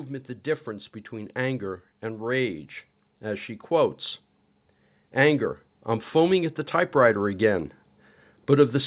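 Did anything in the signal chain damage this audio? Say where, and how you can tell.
Yes. The automatic gain control in the call processing judged the input too quiet and kept raising its gain. From 0.07 to 4.0 s the level climbs by about 6 dB, then from 4.98 to 7.76 s by about 4 dB, with speech and background swelling together.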